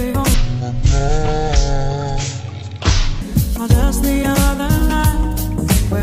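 From 0.34 s to 3.22 s the audio shows a stereo read as mono fault. Left and right samples were taken one after another as if they belonged to a single channel, so every stereo frame became two mono samples. The sound plays at half speed and a full octave lower, dragged and muddy. On a spectrogram everything shifts downward and stretches in time, with a fainter mirrored copy in the upper half.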